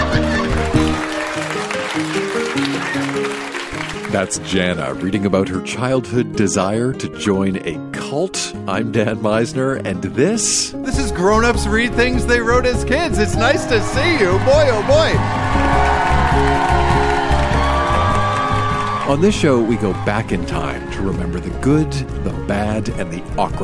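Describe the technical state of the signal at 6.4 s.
Nothing is wrong with the signal at 6.4 s: the audio there is intact, with no dropout, distortion or other fault to be heard.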